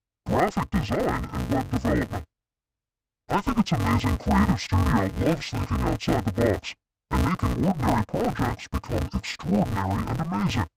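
From start to finish the sound has a dull, robotic quality with a steady buzz around 188 Hz. That's the signature of interleaved audio read as planar. Each chunk of alternating left and right samples gets split down the middle, and each half is played as one channel. The chunks here are short, about 5.33 ms, which fits a 256-sample block. So there's no clear octave drop, just that smeared, buzzing texture at the block rate.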